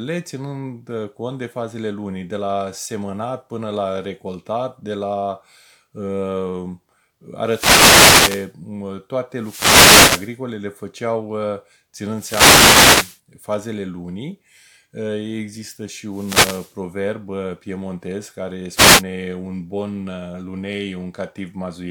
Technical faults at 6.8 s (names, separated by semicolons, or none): none